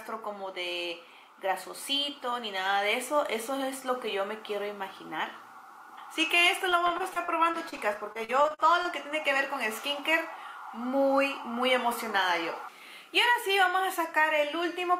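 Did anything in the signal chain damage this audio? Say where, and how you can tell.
Yes: repeated packet loss, network stage, 6.69 to 8.86 s. Fifteen holes, up to 42 ms each, are patched by continuing the previous sound. It turns choppy, with pieces missing.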